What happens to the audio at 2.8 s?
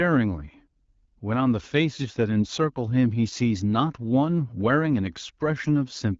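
Nothing goes wrong at 2.8 s; the speech carries on intact through that moment, with only the light, even coloration of the AMR wideband (HD Voice) codec at 12.65 kbit/s.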